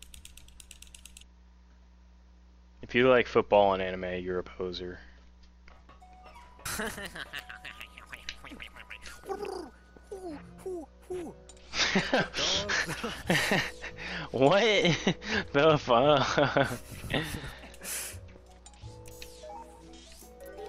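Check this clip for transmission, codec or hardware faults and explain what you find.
No faults detected here.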